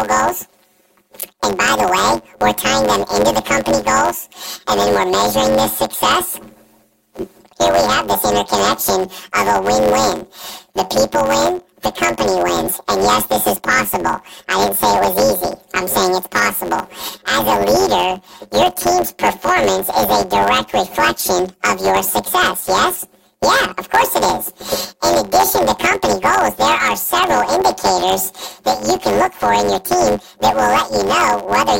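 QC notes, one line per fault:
Throughout: planar audio read as interleaved. The speech carries a steady robotic buzz at about 92 Hz, with no clear octave shift and a normal overall pace. Each 10.88 ms block stores all left samples and then all right samples, but playback reads it as alternating pairs. Each block's left half and then its right half play at double speed. Because the blocks are so short, the switching at 91.9 Hz is heard as buzz rather than raised pitch.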